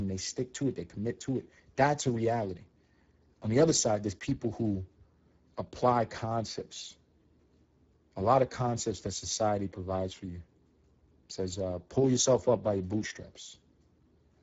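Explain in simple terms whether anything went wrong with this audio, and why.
From start to finish, the speech has plainly audible roughness and graininess, with nothing above about 7.7 kHz. This is Speex codec damage: the old voice-chat compressor squeezed the speech into too little data, so it rebuilt the voice only approximately.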